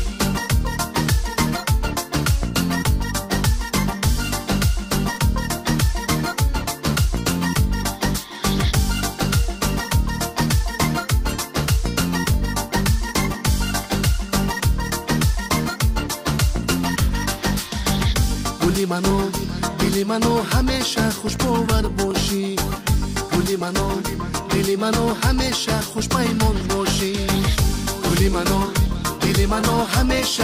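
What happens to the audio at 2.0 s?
At 2.0 s the audio is partway through a run of regular clicks, every 0.75 s from 0.32 s to 30.36 s. These are clock drift buffer slips, likely from two clocks about 0.1 percent apart, forcing a few dozen samples to be dropped or repeated. Each shows as a waveform discontinuity and a thin vertical broadband line on a spectrogram.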